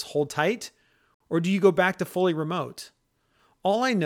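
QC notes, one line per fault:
1.14–1.20 s, Bluetooth stall: the speech drops to 60 ms of true silence and then resumes where it stopped or slightly later, likely because interference held up packets and the headphone buffer ran dry. Unlike a concealed packet loss, the gap is clean silence, not smeared or repeated sound.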